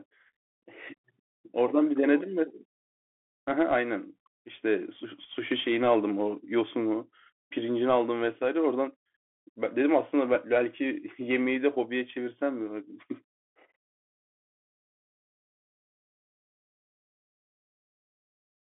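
Speech run through a Bluetooth CVSD headset codec throughout: nothing above 3.8 kHz, scratchy s sounds and grainy hiss, which fits one-bit delta coding at 64 kbps.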